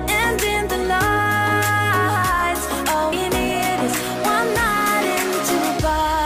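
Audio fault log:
3.11 s, damaged data in a compressed stream: a brief blip of under 20 ms cuts across the sound. At this point some bytes of the encoded stream arrived wrong, so the decoder could not read the frame there as valid audio. It either rendered the corrupt values as a burst of garbage or dropped the frame while it hunted for the next intact frame header to regain sync, producing this short glitch.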